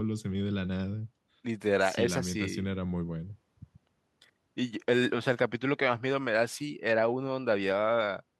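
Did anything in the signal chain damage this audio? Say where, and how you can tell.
No, nothing anywhere in the chain audibly damages this speech recording.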